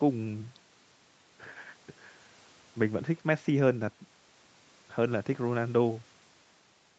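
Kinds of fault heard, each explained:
No faults are heard.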